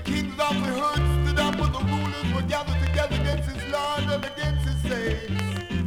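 From 3.87 s to the end at 5.86 s, a thin feedback whistle at 3.1 kHz sits about 20 dB below the sound. Likely a loudspeaker-to-microphone loop held at the edge of oscillation. It swells and fades slowly in level, unlike a fixed interfering tone, and never swells into a runaway howl.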